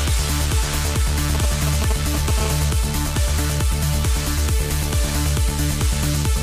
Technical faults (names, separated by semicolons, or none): GSM signalling bursts; GSM phone buzz